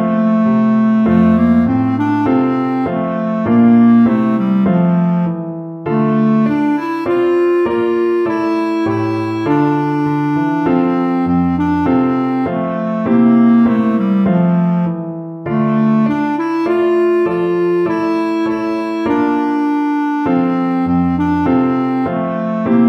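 No technical faults can be heard anywhere in this recording.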